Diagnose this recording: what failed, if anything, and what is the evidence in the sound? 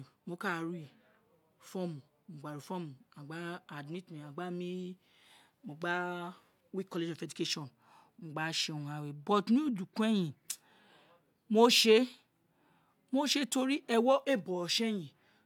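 Nothing in this speech recording points to a failure at any stage of the signal chain. No event in the sound marks a fault, so there is nothing to diagnose.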